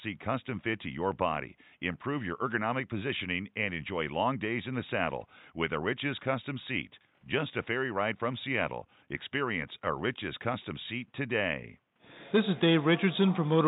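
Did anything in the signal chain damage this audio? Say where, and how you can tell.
No, nothing damaged this audio.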